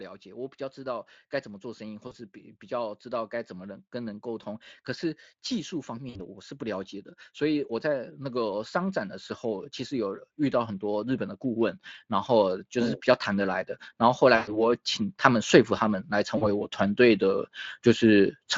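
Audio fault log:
2.07–2.14 s, 6.09–6.20 s, 14.35–14.70 s and 16.37–16.46 s: VoIP packet loss concealed by the speech codec. The gaps, about 40, 60, 120 and 40 ms long, are filled by the decoder repeating its last pitch and filter at falling gain, so the sound smears into a buzzy or coloured tail and stays weak briefly afterwards. A plain dropout would leave silence instead.
5.48–18.32 s: automatic gain rising. The level climbs gradually by about 16 dB as the gain control lifts a too-quiet input. Voice and background swell together, which separates it from a talker moving closer, where mainly the voice would grow.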